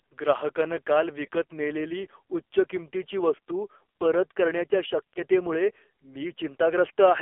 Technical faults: AMR narrowband mobile codec; lost AMR speech frames

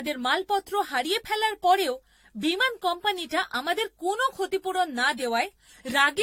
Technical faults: generation loss

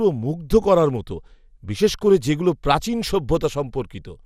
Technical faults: MP2 compression

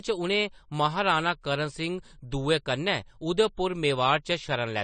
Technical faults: AAC compression

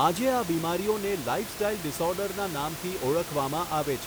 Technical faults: none

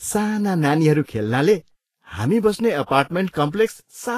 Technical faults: Vorbis compression

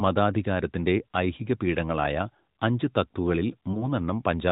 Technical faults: lost AMR speech frames

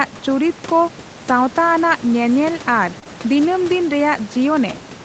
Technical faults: short concealed packet loss

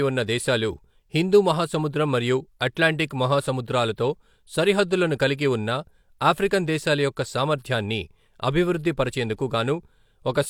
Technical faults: none

